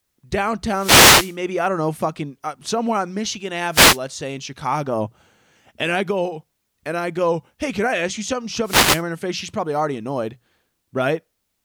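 Wireless microphone noise hits at 0.73 to 1.38 s, before "I don't know fucking", at 3.71 to 3.99 s, and at 8.64 to 9.03 s, after "I ask you something". Each time the radio signal fades. Receiver static swishes over the speech.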